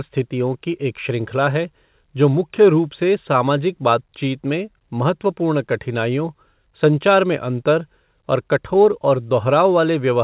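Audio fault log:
Nothing stood out on listening to this speech, which carries the narrow telephone-band sound of its call path with nothing above 4 kHz.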